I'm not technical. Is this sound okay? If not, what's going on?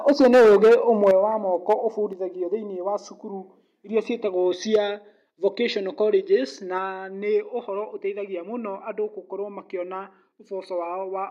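No. The microphone's input was likely set too high, so the loudest moments hit the top of what the equipment can record and got their peaks sliced off. That's microphone overload. You can hear it as a harsh, crackly edge on the sound, worst from 0.08 to 1.11 s, where a good share of that stretch is flattened, with shorter crackles at 1.7 to 1.74 s and 4.74 to 4.76 s.

The calling software then likely reacted by turning the microphone down in sudden jumps. That's the microphone volume stepped down. Each time, the speech and the background around it drop in loudness abruptly instead of smoothly. It happens at 0.1, 1.11, 2.13, 4.76 and 6.78 s. The biggest drop is at 1.11 s, right as the long crackly stretch ends. The drop at 4.76 s comes just after a crackle too.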